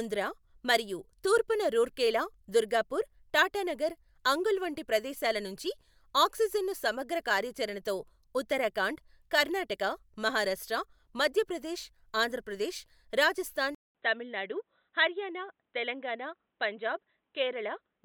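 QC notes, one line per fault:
13.75–18.04 s, input switched to a poorer device: after "మధ్యప్రదేశ్ ఆంధ్రప్రదేశ్ రాజస్థాన్", a 200 ms gap, then dull, slightly quieter sound cut above 4 kHz, likely a narrowband headset profile.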